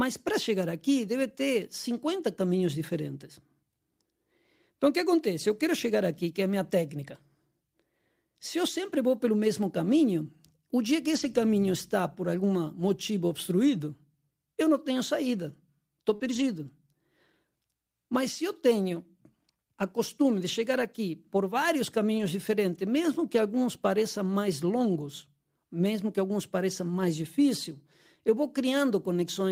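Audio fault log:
11.11–11.37 s, 16.20–16.42 s and 20.78 s: lost packet rebuilt from error correction. Between "caminho o dia que" and "está por algum motivo", just after the concealed loss at 16.2 s, and between "acostume costume de chegar" and "aqui por vários", the audio turns rougher and noisier with no gap. The missing packets were replaced by the low-bitrate copies carried in the following packets, about 140 ms, 120 ms and 20 ms of rebuilt sound.
16.15–16.22 s: short concealed packet loss. Right after "não tenho saída estou", about 40 ms of the stream never arrived in time. The decoder filled roughly 41 ms by extending the preceding sound from its pitch or as shaped noise, then crossfaded back into the real signal. This is heard as a brief smear or wobble. It runs straight into the error-corrected stretch that follows.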